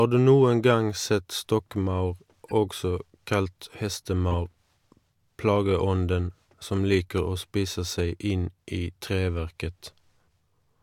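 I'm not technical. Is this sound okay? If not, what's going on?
No. There are two short glitches at 2.48 to 2.52 s, after "noen gang sett stokkmaur", and at 4.31 to 4.34 s. Each is a corrupt frame decoded: a damaged chunk of data played anyway.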